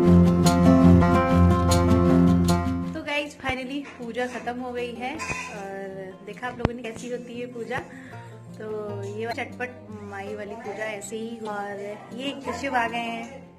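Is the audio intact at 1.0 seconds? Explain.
No. From 0.98 to 1.03 s there is damaged data in the compressed stream: some bytes in that stretch are wrong, so the decoder misreads those frames, loses sync and hunts for the next valid frame header before decoding normally again. It sounds like a brief chirp, squawk, click or short hole lasting about 44 ms. On a spectrogram it shows as a short disturbance unlike its surroundings, and the waveform shows an abrupt, irregular break at that point.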